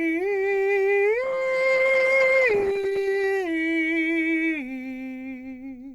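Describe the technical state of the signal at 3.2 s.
At 3.2 s the music is near the end of an adaptive stream at a lower bitrate (1.24–3.24 s): codec artefacts rise, consistent with a drop from about 64 to 16 kbit/s Opus. The switch is abrupt, with no silent gap, unlike a buffering dropout.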